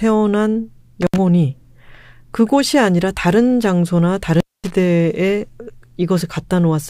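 At 1.02 to 1.18 s and again at 4.34 to 4.71 s the speech drops out through an intermittent contact, a loose cable or plug briefly losing connection. The first gap is about 69 ms, the second about 235 ms. Each break opens and closes with sharp crackle, and faint hiss remains while the line is open. A waveform shows spiky clicks framing a near-flat stretch. A spectrogram shows vertical broadband lines at each edge with an empty band between.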